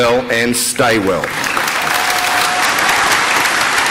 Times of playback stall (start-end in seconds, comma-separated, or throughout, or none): none